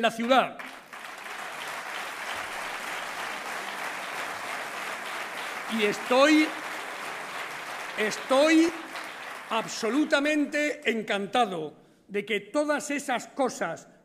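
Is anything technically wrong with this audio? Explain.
Yes, there is damaged data in a compressed stream at 8.69 s and from 11.68 to 11.70 s. Corrupted bytes make the decoder misread frames and lose sync while it hunts for the next header, giving a brief chirp, squawk, click or short hole: on a spectrogram, short broadband vertical smears or gaps; in the waveform, abrupt discontinuities.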